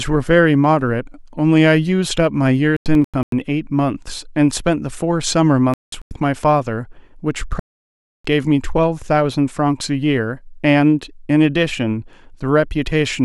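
At 2.77 to 3.41 s, 5.74 to 6.11 s and 7.59 to 8.25 s, the speech cuts abruptly to silence: corrupt frames muted. The decoder rejected damaged compressed frames and the player filled silence, preserving timing. Gap lengths suggest several frames each.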